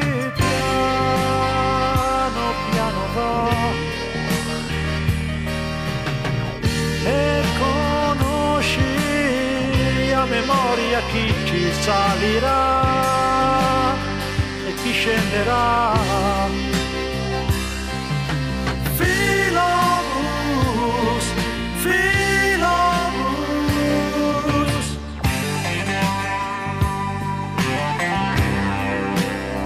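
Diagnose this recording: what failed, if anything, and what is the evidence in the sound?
Nothing failed; no faults detected.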